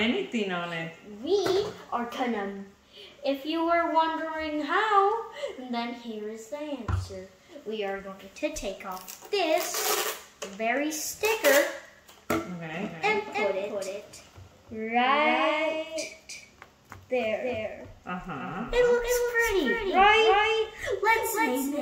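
A doubled audio track starts abruptly at 12.74 s and lasts to the end. A full-band copy trails the sound by roughly 300 ms, around 5 dB quieter, with no decay or room colour. It likely comes from a slower second capture path or a misaligned edit.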